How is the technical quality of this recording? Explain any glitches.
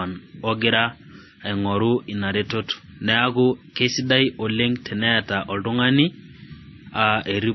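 The recording has compromised quality throughout, from stacked codec damage. The likely cause is transcoding between lossy codecs: a low-bitrate MP3 encode, consistent with about 24 kbit/s, was re-encoded as WMA. Nothing remains above 5.9 kHz, so the speech sounds muffled and band-limited. The MP3's smeared, warbling artefacts persist beneath WMA's own swirly distortion.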